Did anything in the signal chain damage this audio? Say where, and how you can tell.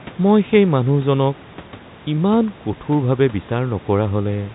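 No, none of the stages in this speech chain have damaged the audio. It sounds like a normal telephone line, with G.711 coding cutting the band off just below 3.9 kHz and the room's background noise sitting about 25 dB under the voice.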